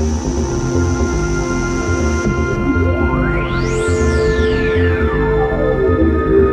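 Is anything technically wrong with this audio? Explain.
No, there is nothing technically wrong with this audio. No fault can be heard at any point in the clip.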